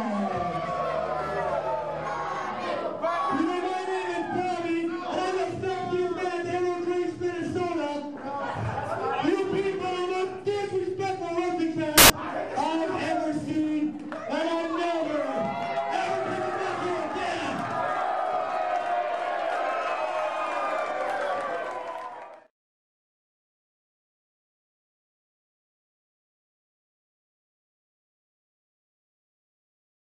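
From 11.98 to 12.10 s the audio turns into a burst of loud, harsh broadband noise, the sign of samples built from the wrong bytes: the reader misaligns or swaps each sample's bytes, so the fast-changing low bits become the loudest part of every value.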